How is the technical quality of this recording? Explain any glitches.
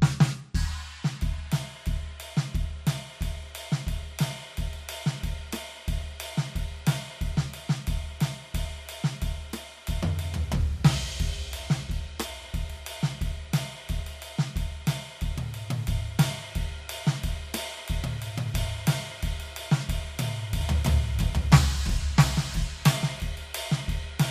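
The recording has one clear glitch near the end. From 20.61 to 23.21 s there is a doubled audio track: the music is most likely being mixed in a second time through a slower path, or an edit is holding two copies out of step. A full-band copy trails roughly 0.7 s behind at about the same loudness, with no decay or room colour, so everything sounds played twice in a dry echo that cuts in and out abruptly.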